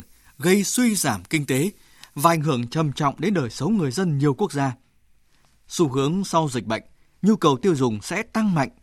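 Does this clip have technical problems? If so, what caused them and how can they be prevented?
Yes. Pre-emphasis left on affects the speech from 0 to 2.37 s. The treble was lifted along a curve matching the FM 75 µs standard, but the complementary de-emphasis was never applied on playback, so the top end stays boosted by about 14 dB at 10 kHz relative to 1 kHz. That uncorrected lift makes the speech sound thin, glassy and over-bright, with exaggerated sibilance. To prevent it, make sure every pre-emphasised path is decoded with the matching 75 µs de-emphasis before the audio is recorded or passed on.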